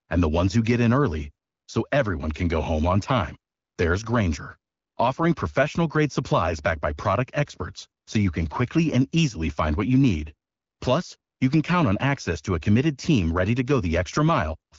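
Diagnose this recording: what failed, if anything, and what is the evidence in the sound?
Nothing in the chain has broken here: the speech has the character of an AMR wideband (HD Voice) call, which fits the 12.65 kbit/s mode, where the codec leaves only a light touch, and that's simply the codec doing its ordinary job.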